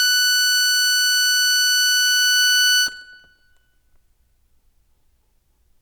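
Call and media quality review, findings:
Music signal shows no audible defects in level, continuity or timing, with no event warranting a ticket entry.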